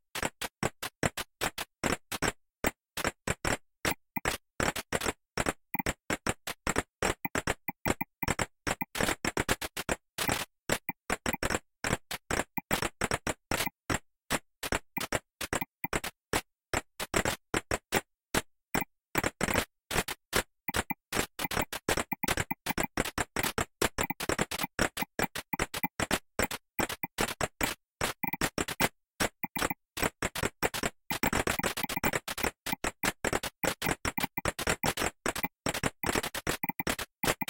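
No technical faults are audible.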